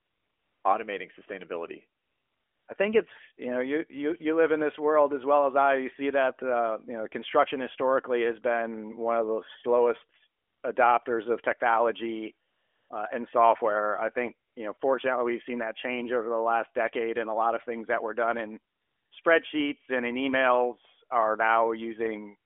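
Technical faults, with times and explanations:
0.00–0.64, 2.00–2.68, 10.42–10.64, 12.48–12.90, 14.48–14.56, 14.78–14.80, 18.74–19.12 and 19.22–19.24 s: AMR comfort noise. The phone judged these gaps silent and stopped sending speech frames, so the receiver swaps the real background for a smooth, steady synthetic hiss that audibly switches in and out.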